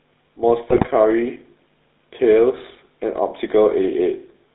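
Speech coded throughout with the GSM full-rate codec, and the codec damage is plainly audible. The audio sits in a narrow line band of roughly 200 Hz to 3.7 kHz, with nothing above it. The voice carries the buzzy, gravelly texture of a coder that models the vocal tract and excites it with a sparse, regularly spaced pulse train, which fits the 13 kbps full-rate scheme. From 0.70 to 0.87 s there are GSM bit errors: the sound breaks into squawks and gargling pops as corrupted filter, pitch and gain parameters distort the spectrum and level. That span covers several 20 ms frames, and the damage points to a bit error rate of a few percent on the link.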